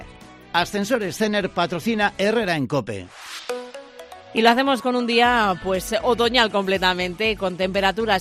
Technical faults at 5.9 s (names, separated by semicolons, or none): none